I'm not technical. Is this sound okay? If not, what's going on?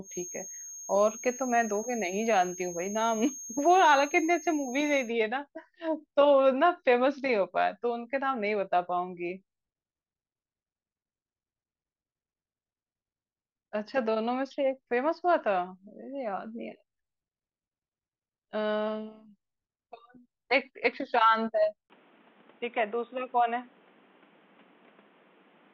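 No. From the start to about 5.15 s, a thin, high-pitched whistle near 6.5 kHz sits quietly behind the speech. This is a feedback whistle, likely caused by a loudspeaker's sound leaking back into the microphone and hovering just short of howling.

At 21.88 s there is a brief gap of about 20 ms. From there to the end, the speech turns dull and muffled, a little quieter, with faint new background noise. Nothing above about 3.8 kHz comes through. This is likely the input switched to a poorer device, such as a headset or a different microphone.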